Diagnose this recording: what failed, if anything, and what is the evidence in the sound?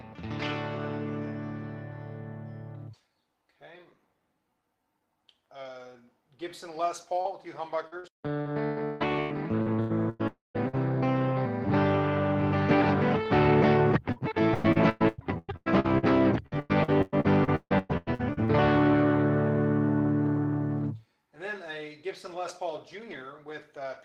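Network, short concealed packet loss: at 7.21 to 7.28 s about 40 ms of audio is missing. The receiver extended the preceding sound across the hole, leaving a brief smear.

Network, lost packet rebuilt from error correction: within that same spot, 7.25 to 7.27 s sounds rougher and noisier. A 20 ms frame was replayed from the low-bitrate redundant copy carried in the next packet.

Network, repeated packet loss (robotic sound): from 7.87 to 10.75 s there are ten gaps, the longest 160 ms. From 14.12 to 18.51 s there are twenty-one, the longest 150 ms. Each hole is patched by continuing the last sound, giving choppy audio with pieces missing, with some frames rebuilt roughly from redundant copies.

Network, long network dropout: at 10.27 to 10.57 s the sound continues as a fading fill, then goes silent for about 160 ms before audio resumes. This is likely a long network dropout, with about 280 ms never delivered.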